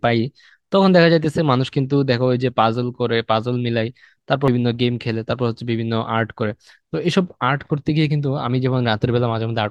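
At 4.48 s the speech jumps forward abruptly. This is compressed frames skipped. A few whole frames of the encoded audio were never played, either lost from the file or rejected by the decoder as damaged. Roughly 300 ms of speech vanishes, which fits about three frames of around 85 ms each.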